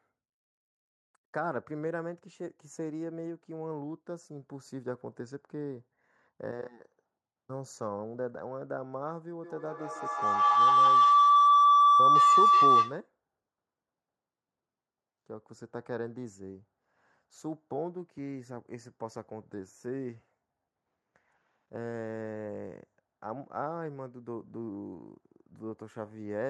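From 9.44 s to 13.08 s the speech is overtaken by a feedback howl. Sound from a loudspeaker is reaching a microphone on the same call and coming back louder on each pass, so the repeats climb rather than decay and collapse onto a single tone near 1 kHz. The loop's round-trip delay is roughly 150 ms, and the howl peaks about 15 dB above the speech before the loop is broken.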